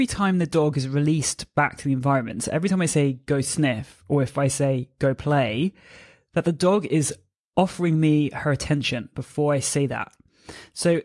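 No technical faults are audible.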